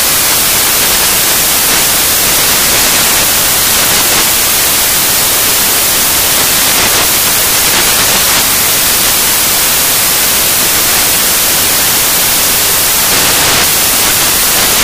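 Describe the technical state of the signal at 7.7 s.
Loud, harsh broadband noise fills the signal at 7.7 s, as it does throughout: samples built from the wrong bytes, with misordered low bits dominating each value.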